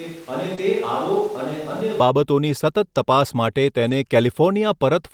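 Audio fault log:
0.0–2.0 s, switch to a distant microphone: already under way at the start, with roomy, hollow, thin speech about 10 dB quieter and room noise roughly 25 dB below the speech. This is likely a farther pickup replacing the close microphone, and the close sound returns abruptly just before "બાબતોની સતત તપાસ માટે".
0.55–0.59 s, short concealed packet loss: a brief smear where 20 ms of audio never arrived. The decoder extended the preceding sound for about 16 ms, then blended back into the received signal.
0.57–0.59 s and 3.87–3.93 s, lost packet rebuilt from error correction: 20 ms and then 40 ms, the latter right after "બાબતોની સતત તપાસ માટે", play as rougher, noisier patches. These fit one and then two packets replaced by low-bitrate redundant copies.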